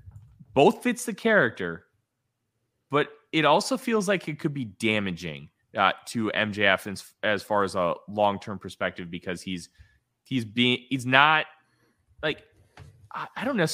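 No technical faults can be heard anywhere in the recording.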